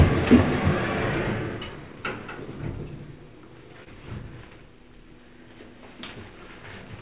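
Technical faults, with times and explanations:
3.84–3.88 s, short concealed packet loss: about 20 ms of audio arrived too late for the decoder, which filled roughly 18 ms of the hole by extending the preceding sound before blending back. This leaves a brief smear or wobble rather than the silent gap of a true dropout, heard against the narrowband call audio with nothing above 4 kHz.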